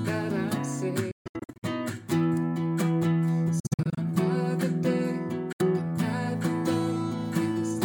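From 1.11 to 1.64 s, 3.60 to 3.98 s and at 5.52 to 5.62 s, the sound cuts to silence in broken runs, most likely a Bluetooth dropout from late packets. Unlike a stall, it resumes further on rather than where it stopped.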